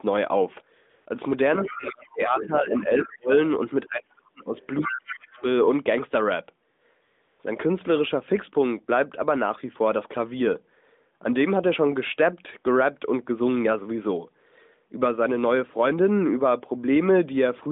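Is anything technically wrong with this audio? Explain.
Yes. Three kinds of fault are audible on this narrowband phone line, whose sound stays within roughly 200 Hz to 3.6 kHz.

AMR comfort noise appears from 0.90 to 1.06 s, 6.74 to 6.82 s and 7.02 to 7.40 s. The real background gives way to a smooth, even hiss that switches in and out. The sending phone judged these moments silent and stopped transmitting speech frames for 160, 80 and 380 ms, so the receiver filled each gap with synthetic noise.

The other side's voice leaks through from 4.57 to 5.15 s, at about 10 dB below the main talker. A much fainter scrap follows from 5.33 to 5.42 s, at around 30 dB down. This is likely loudspeaker sound reaching the far device's microphone that its echo canceller failed to remove.

Speech is suppressed in double talk between 4.81 and 5.44 s, overlapping that leak. The talker's level dips sharply, by up to roughly 30 dB, for about half a second in total. 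The likely cause is the echo canceller turning everything down because it could not separate the talker from the echo while both sides spoke.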